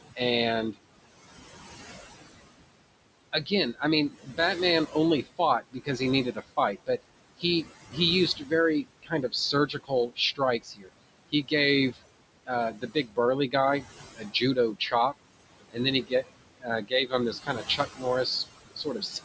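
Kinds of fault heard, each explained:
Noise suppressor artifacts: the room noise, about 13 dB below the speech, is pushed down by about 20 dB between phrases and returns beneath them. On a spectrogram the noise floor pumps frame by frame.
Speech cut by the noise suppressor: from 3.33 to 18.05 s, roughly four seconds of weaker speech is treated as noise and dropped by up to about 22 dB, plus a 12 dB dip at 18.76–19.14 s. The waveform shows abrupt envelope notches, and the spectrogram shows faded consonant energy.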